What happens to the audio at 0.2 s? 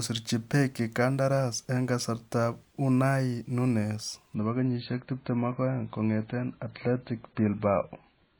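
Nothing goes wrong at 0.2 s; the speech plays through that moment intact, with no dropout, click or distortion.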